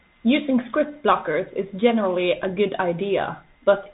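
From start to end the speech carries Bluetooth CVSD headset codec damage, plainly audible. Nothing passes above 3.8 kHz, so a spectrogram shows a flat ceiling there. The one-bit delta coding lags loud high sounds, roughening s sounds and laying a granular hiss beneath, consistent with a 64 kbps link.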